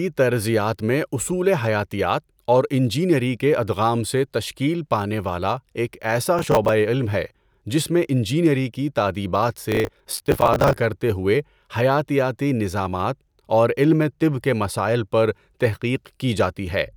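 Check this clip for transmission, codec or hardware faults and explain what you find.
There's processor overload crackle in two bursts, from 6.39 to 6.69 s and again from 9.64 to 10.77 s. The processor kept missing its deadlines on short buffers of around 10 ms and replayed stale audio each time, so you hear a gritty, tearing crackle over the speech that clears when the load drops.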